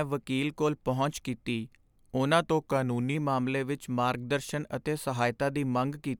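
A speech recording with a drift correction step from 2.44 to 3.15 s: the sound slows by 5.8% and drops 104 cents, about a semitone, then snaps back, likely a clock-matching resampler adjusting its buffer. On a spectrogram, the harmonics step down abruptly and return.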